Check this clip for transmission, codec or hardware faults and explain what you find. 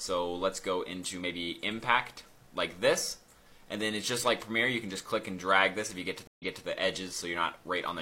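One transmission fault: a stream reconnect between 6.27 and 6.66 s. The connection dropped, so the player lost its feed, re-established the link and started a new decoder partway through the stream, with the server resending a stretch of already-played material. You hear about 0.1 s of silence, then the sound picks up again roughly 0.28 s earlier than where it cut off, so that short passage repeats.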